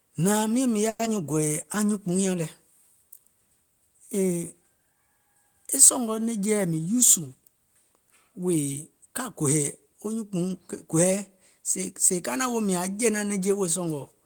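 Call audio freeze, 0.89 to 1.01 s. The sound stalls for about 100 ms: the last bit of speech is drawn out as a fading buzz rather than dropping to silence, and then the speech picks up exactly where it left off with nothing skipped. The likely cause is packets held up in transit until the jitter buffer ran dry, so the receiver stretched what it had and the call's delay grew by 100 ms.

Short concealed packet loss, 1.05 to 1.08 s. Just after the freeze, 40 ms of audio never reached the decoder in time. The receiver covered the gap with only about 10 ms of synthesized continuation before blending back into real audio. The result is a quick smear or wobble where a brief sound can disappear. Because less was filled than was lost, the built-up delay shrinks by around 30 ms here.

Jitter buffer speed-up, 6.51 to 7.43 s, right after "e sɔ̀ngɔ̀". The buffer was holding more audio than its target, so the receiver trimmed many tiny pitch-period slices in quick succession, removing roughly a tenth of a second overall. 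Across this stretch the speech runs at about 109% of normal speed with its pitch unchanged, giving it a rushed quality before the pace settles again.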